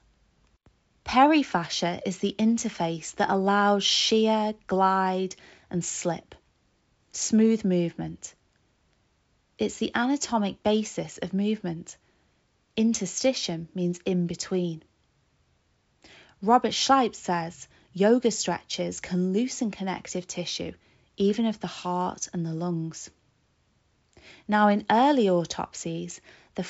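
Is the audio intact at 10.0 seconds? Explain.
Yes, the audio is intact at 10.0 seconds, with nothing there beyond the normal G.722 wideband telephone coding, which carries the sound up to about 7.7 kHz.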